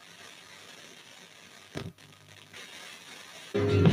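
Held sounds and tails sag while attacks come through, so the audio pumps and thins for its whole length, swinging by about 10 dB. This is a noise suppressor applied to music or sounds: a speech-oriented suppressor is treating sustained tones and ambience as noise and pulling them down.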